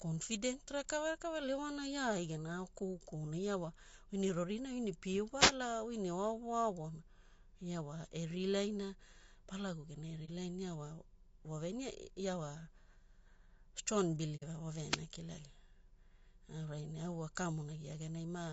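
Throughout the recording, the speech has the rough, grainy texture of likely low-delay AAC compression (AAC-ELD). At this low bitrate, noise fills the gaps between the pitch harmonics and the top band turns thin and synthetic, which fits a low bitrate near 32 kbps.

At 5.39 to 5.53 s, between "ne pie" and "oi ne oaovo aovona", there is a wireless microphone noise hit. The FM radio link faded as reflections cancelled, letting receiver noise rise, and it comes through as a brief swish of static. A second hit of the same kind falls at 14.87 to 15.01 s.

At 10.25 s, just after "genai e", comes AAC frame loss with muting. The decoder zeroed missing audio, and the overlapping windows fade the sound out and back in, leaving a brief dip of about 30 ms, which fits one lost frame. A longer gap of about 60 ms follows at 14.36 to 14.44 s, consistent with two frames.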